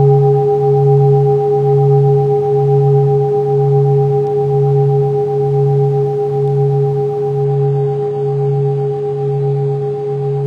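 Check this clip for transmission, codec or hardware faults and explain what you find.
There's one fault. From 7.45 s to the end, you're hearing an adaptive stream at a lower bitrate. The connection dipped and the player swapped to a much leaner encode without a gap. The treble gets cut off at 11.3 kHz, which points to roughly 12 kbit/s HE-AAC.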